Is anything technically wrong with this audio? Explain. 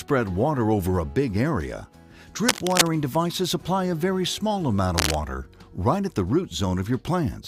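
Yes. Cable scratch noise appears twice, from 2.47 to 2.90 s and again from 4.98 to 5.18 s, each time as a dense, ragged burst of scratching roughly as loud as the sound itself. The likely cause is a worn cable or connector being moved, making its contact resistance jump rapidly. Unlike a single digital click or a dropout, these are irregular clusters of noise lasting a fraction of a second, laid over the sound rather than interrupting it.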